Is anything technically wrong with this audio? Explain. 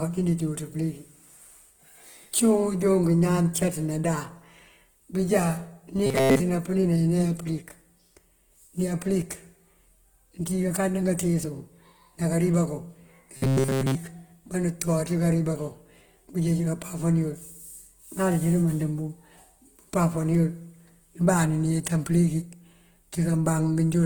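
Yes, two problems are audible.

Opus compression runs through the whole clip, likely at about 16 kbps in its music mode. Starved bands are filled with folded or noisy content, so the speech sounds grainy and rough while keeping its full bandwidth.

Robotic sound from repeated short buffers appears at 6.07–6.40 s and at 13.37–13.95 s, just after "ná kariba kuŋ". The speech turns into a rigid metallic buzz near 133 Hz, likely from a segment about 7.5 ms long being replayed in place of new audio. The first stretch is mostly repeats and the second entirely.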